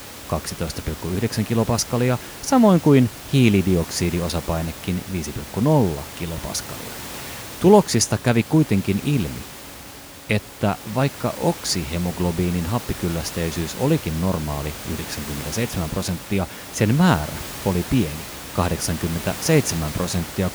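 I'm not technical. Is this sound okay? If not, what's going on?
Yes, this sound is okay, and nothing is going wrong with it.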